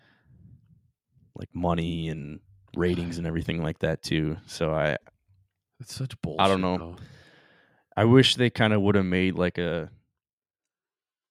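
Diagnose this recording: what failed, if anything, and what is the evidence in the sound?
Zipper noise appears in this speech from 9.46 to 10.72 s, just after "of would have made". The level drops about 15 dB in around fifty steps per second, each a small click. The gain is updated per buffer without smoothing.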